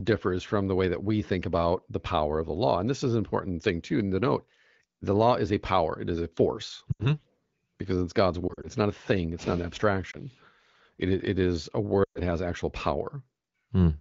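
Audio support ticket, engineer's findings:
Lost AMR speech frames on the AMR wideband (HD Voice) path: sound dropping to near silence at 6.91–7.06 s, 8.47–8.67 s (broken-up dips scattered over 160 ms, runs up to 40 ms), and 12.03–12.19 s (longest, 120 ms lost), plus a single brief dip at 10.11–10.16 s. Decoder concealment repeats the last good pitch and vocal tract settings with decaying gain. This differs from network dropouts, which give hard gaps or clicks rather than smeared, fading sound. Codec coding is light, which points to a higher-rate mode.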